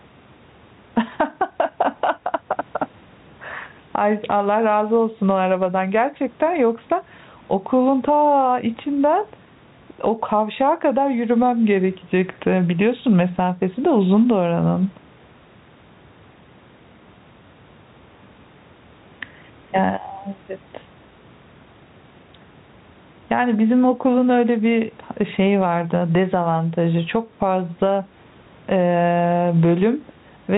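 Gain pumping runs through the whole speech clip, likely from input gain set far too high with a fast limiter clamping each loud syllable. Background swells in pauses and ducks under speech by roughly 10 dB, squashing dynamics.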